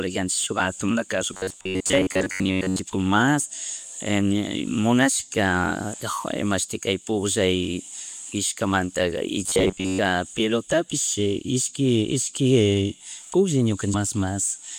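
From 1.33 to 2.79 s and again from 9.44 to 10.0 s the speech goes robotic: a rigid, metallic buzz near 94 Hz. That's likely repeated short buffers, about 10.7 ms looped in place of most of the real audio, so the words only roughly survive.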